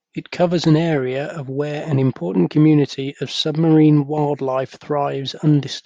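At 1.85 s, between "an area of where" and "an important community of", the speech carries one sharp click, likely from dropped samples: about a single sample is lost, so the waveform jumps straight to a later value. Unlike a dropout, no sound goes missing; only the step is heard.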